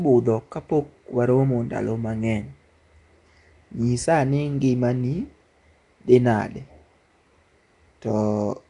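Throughout the speech, the sound is plainly damaged in a way that likely comes from Nellymoser compression, pointing to roughly 44 kbps, with nothing above 10.6 kHz. Unlike MP3 swirl, the weak bands are refilled with noise, leaving a rough, hissy halo and a smeared, underwater quality.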